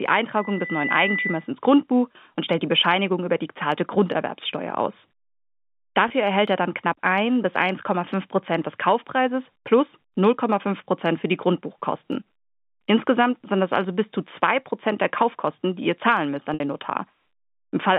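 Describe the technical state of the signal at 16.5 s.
Packet loss with pitch repetition occurs from 16.54 to 16.60 s, just after "ihr zahlen müsst an". About 60 ms of audio went missing, which fits three lost packets, and the receiver filled the gap by repeating the last pitch period, giving a brief held, buzzy sound over the G.711 telephone band.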